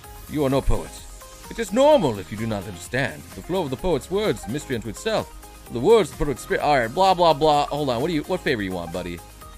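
There are no technical faults to describe in this recording.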